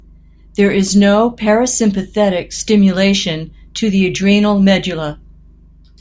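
No technical faults can be heard anywhere in the recording, and the speech signal stays steady and intact throughout.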